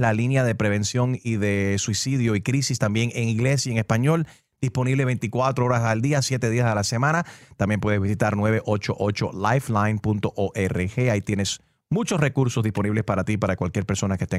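No technical faults can be heard anywhere here.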